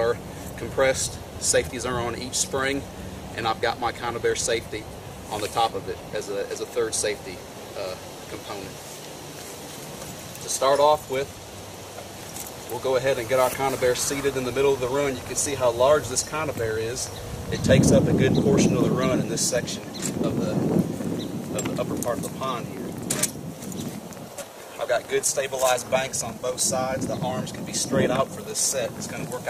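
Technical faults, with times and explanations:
12.37–29.48 s, train of clicks: from 12.37 s to the end, a run of sharp, near-identical ticks rides over the sound at about eight per second, but unevenly spaced, around 150 in all. Each click peaks at roughly the level of the sound itself, so the ticking stays plainly audible through quiet gaps as well. Identical short pulses arriving in an irregular stream most likely come from electrical interference or a faulty connection or power supply injecting spikes into the signal path.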